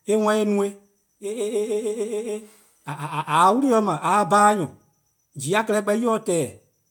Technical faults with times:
none

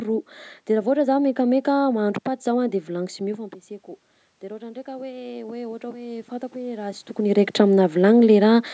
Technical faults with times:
4.58-7.14 automatic gain rising

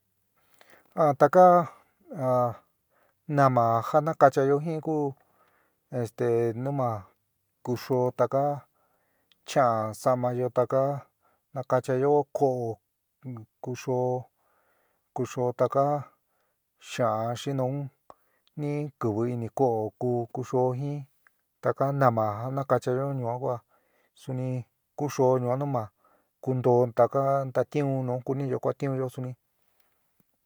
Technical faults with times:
none

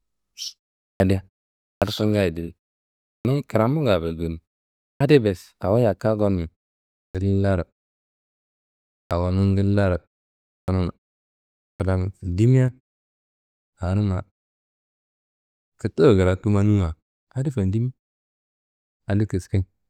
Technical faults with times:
0.95-1.00 clipped start after a pause
1.77-1.82 clipped start after a pause
3.20-3.25 clipped start after a pause
4.96-5.00 clipped start after a pause
7.10-7.15 clipped start after a pause
9.06-9.11 clipped start after a pause
10.63-10.68 clipped start after a pause
11.75-11.80 clipped start after a pause

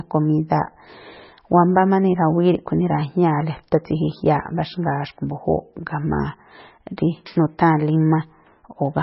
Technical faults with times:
0.00-9.02 MP3 compression

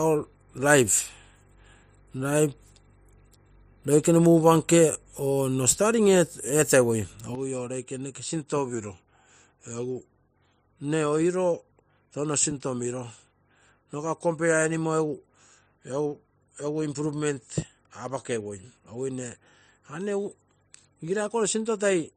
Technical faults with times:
7.35-22.16 input switched to a poorer device
8.74-10.72 drift correction step

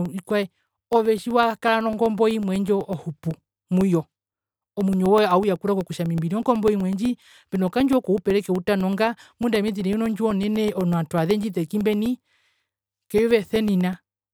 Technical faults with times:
0.05-14.18 periodic USB or driver dropouts

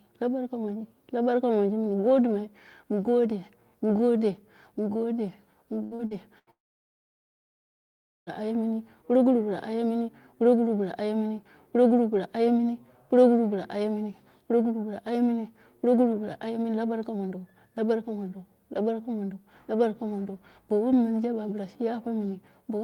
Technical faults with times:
5.83-6.50 repeated packet loss (robotic sound)
6.51-8.29 long network dropout

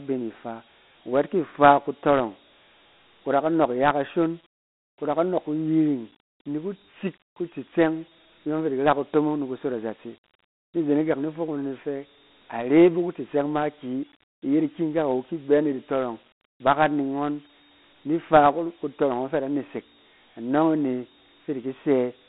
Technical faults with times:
0.00-22.28 Dialogic VOX ADPCM

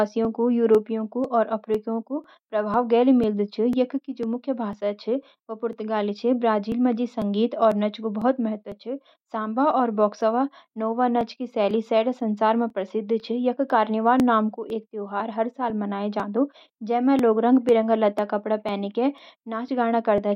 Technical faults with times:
0.25-20.18 periodic USB or driver dropouts

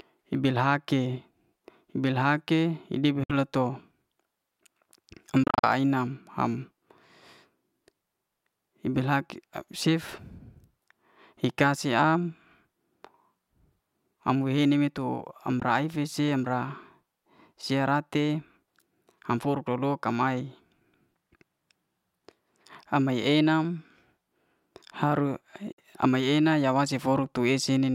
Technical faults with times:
3.24-3.31 Bluetooth dropout
5.43-5.66 Bluetooth dropout
15.60-15.63 Bluetooth dropout
25.72-25.79 Bluetooth dropout

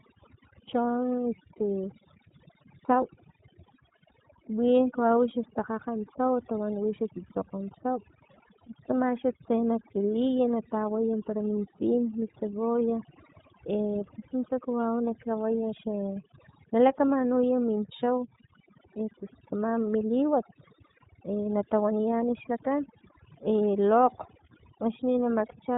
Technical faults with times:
0.00-25.77 overdone noise removal
0.00-25.77 iLBC codec

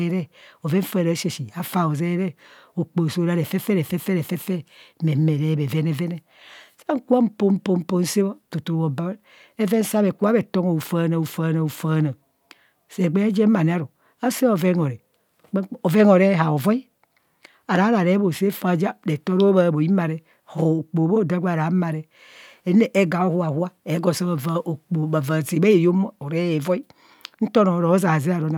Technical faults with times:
none

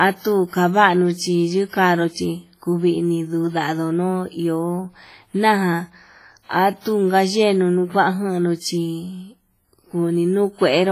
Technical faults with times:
0.00-10.92 WMA compression

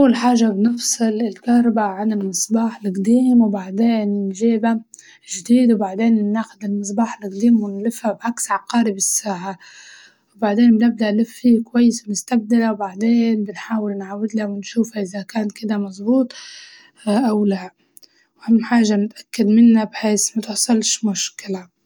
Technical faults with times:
none

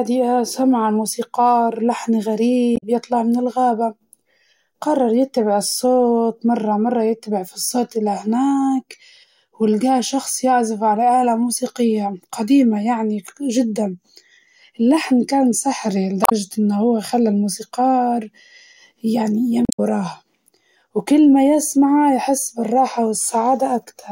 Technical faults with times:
2.73-2.83 damaged data in a compressed stream
16.22-16.32 damaged data in a compressed stream
19.62-19.79 damaged data in a compressed stream

